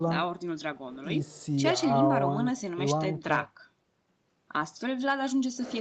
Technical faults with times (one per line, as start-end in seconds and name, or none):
none